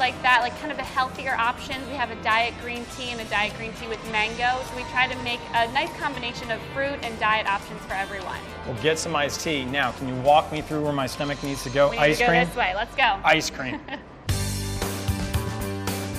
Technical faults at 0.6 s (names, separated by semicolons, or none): none